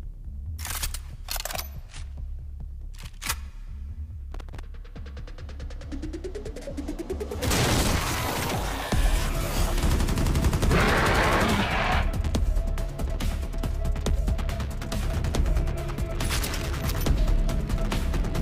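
From 4.34 to 4.60 s an irregular burst of crackle and scratching breaks into the sound, chopping it for about a quarter of a second. This is loose connector crackle: a worn or dirty contact repeatedly making and breaking as it shifts, interrupting the signal.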